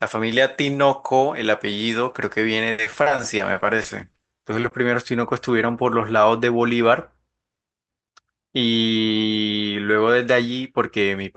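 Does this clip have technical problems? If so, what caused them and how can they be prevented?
Yes. Repeated packet loss (robotic sound) runs from 2.71 to 4.73 s: a rapid series of short holes, the longest 70 ms, each patched by stretching the previous sound. About a fifth of that span is concealed, about 410 ms in all, giving choppy speech with pieces missing. A steadier network path with forward error correction or modest redundancy would prevent it.

A jitter buffer speed-up follows from 6.73 to 7.45 s. After delayed packets arrived in a burst, the receiver trimmed whole pitch periods, around 50 ms in total, so the speech runs at 107% speed with its pitch unchanged and sounds hurried. Reducing network jitter, or letting the buffer drain more gradually, would prevent it.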